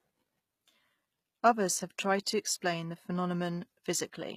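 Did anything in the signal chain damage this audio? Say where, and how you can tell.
Yes, at the codec stage, throughout the speech. The upper spectrum sounds synthetic: sibilants come out gritty and metallic, with treble that doesn't track the lower harmonics. That points to likely HE-AAC compression at a low bitrate, near 20 kbps, rebuilding highs by copying lower bands upward.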